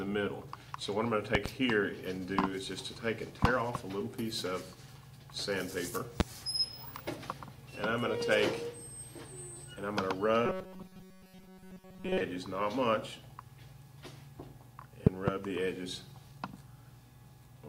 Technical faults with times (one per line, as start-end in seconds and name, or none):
1.35-1.48 loud pop
3.44-3.47 loud pop
6.20-6.23 loud pop
10.46-12.21 robotic sound from repeated short buffers
15.07-15.30 loud pop